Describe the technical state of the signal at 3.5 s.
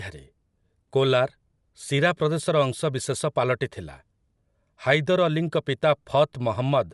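At 3.5 s the speech has a grainy, breathy edge, and nothing is present above about 11.5 kHz. This runs through the whole clip, not just this moment. The likely cause is Bluetooth LC3 compression: the codec works in short frames, consistent with 10 ms, and at a rate which fits around 48 kbps, it discards much of the upper spectrum and fills gaps with noise, leaving plainly audible codec damage.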